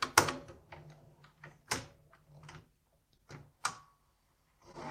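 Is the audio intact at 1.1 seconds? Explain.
Yes, at 1.1 seconds the audio is intact, with no dropout, distortion or other fault in the sound at that moment.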